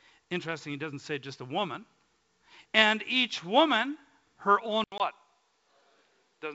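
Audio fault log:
4.84–6.54 s, input switched to a poorer device: right after "each woman her" the sound drops out for about 80 ms, then returns duller, about 5 dB quieter, with nothing above 5.1 kHz and a new noise floor about 50 dB down. This is likely a change to a narrower-band microphone.
4.98–5.01 s, packet loss on an ADPCM call: a hard-edged 20 ms hole, consistent with one lost packet in the G.722 stream. The decoder's adaptive predictor and step size lose step with the sender's, so the speech returns slightly distorted before settling.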